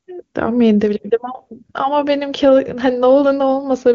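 Nothing stood out on listening to this speech, which comes through the AMR wideband (HD Voice) codec at 23.85 kbit/s with its content ending around 7.4 kHz.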